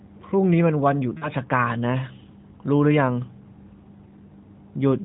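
From 1.18 to 1.29 s, lost AMR speech frames: the decoder repeats its last good pitch and vocal-tract settings at falling gain across a gap that fits two lost 20 ms frames. It sounds like a brief smeared, fading warble, seen as flat, stretched harmonics beneath the narrowband 4 kHz ceiling and a sagging waveform envelope.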